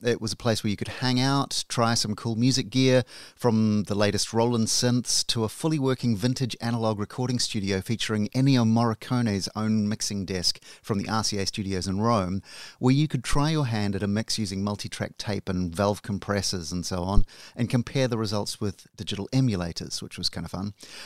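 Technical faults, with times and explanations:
13.33–13.44 s and 17.17–17.24 s, phantom power thump: A deep thump follows "where you could", then another after "valve compressors and so". They peak at about -13 and -6 dBFS and die away within 25 and 14 ms. A supply switching on or off on the live input sends a voltage step through the coupling capacitors.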